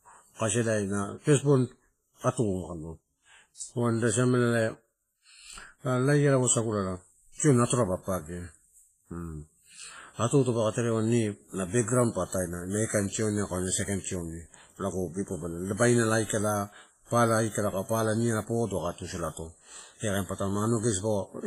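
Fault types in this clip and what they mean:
WMA compression: Throughout, the speech rings and sounds washy, with a hiss that breathes along with it and nothing above 15.4 kHz. This fits a low bitrate near 24 kbps and likely a transform codec smearing heavy quantisation noise across long blocks.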